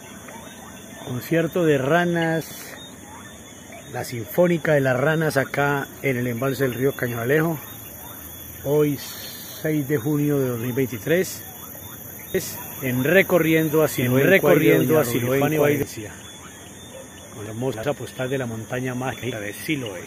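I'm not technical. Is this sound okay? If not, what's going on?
No, there are two kinds of problem.

Chunks out of order: at 2.42 to 2.60 s, 17.46 to 17.83 s and 19.13 to 19.32 s, short pieces of audio, each about a tenth of a second long, play in the wrong sequence. In the first and last spots one piece arrives one step late; at 17.46 s it's three steps late. Nothing is actually missing, which is what separates this from a dropout. The sound is all there, just briefly jumbled.

Doubled audio track: from 12.35 to 15.83 s a second copy of the sound plays on top of the original, about a second behind and about as loud. Unlike a natural echo, the copy doesn't fade away or sound roomy. It is a clean repeat that switches on and off abruptly. The likely cause is that the audio was picked up twice, once through a slower route, or that an edit left two copies out of step.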